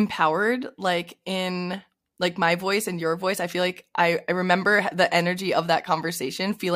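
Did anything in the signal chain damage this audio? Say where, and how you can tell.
No, nothing damaged it.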